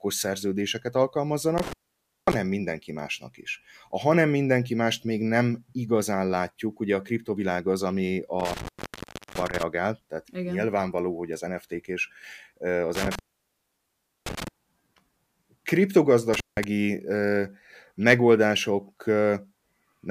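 The speech drops out four times from an intermittent contact, a loose plug or cable briefly opening: 1.58–2.35 s (gap about 0.55 s, just before "mindenki másnak is"), 8.40–9.63 s (about 0.68 s, right after "a kriptovilág az ami"), 12.95–14.48 s (about 1.08 s), and 16.33–16.64 s (about 0.17 s). Each one crackles at the edges, with faint hiss in the gap.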